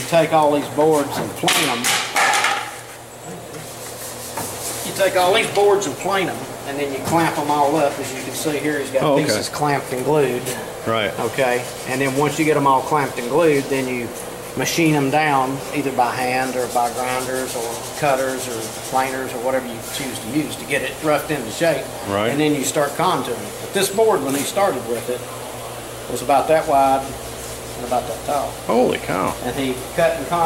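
No dropouts, glitches, distortion or other technical faults can be heard anywhere in the recording.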